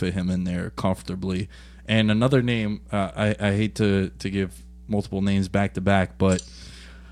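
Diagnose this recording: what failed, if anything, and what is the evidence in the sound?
Mains hum, analogue wiring: a steady 60 Hz tone about 20 dB under the speech throughout, from power-line coupling. Its fixed pitch rules out wandering rumble.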